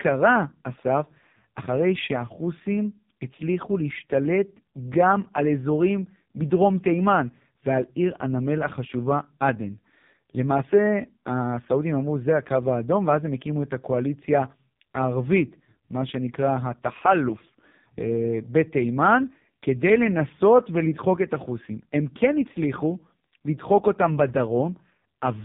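AMR narrowband mobile codec damage runs through the whole speech clip. Nothing above 3.8 kHz survives. The speech is rebuilt from a vocal-tract model driven by sparse pulses, so it sounds heavily buzzy and synthetic, which points to AMR-NB's 5.15 kbps mode.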